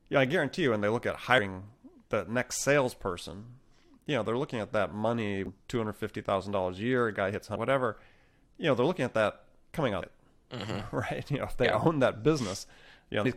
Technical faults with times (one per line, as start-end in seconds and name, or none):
1.37 damaged data in a compressed stream
5.46 damaged data in a compressed stream
7.55 damaged data in a compressed stream
10.01 damaged data in a compressed stream
13.24 damaged data in a compressed stream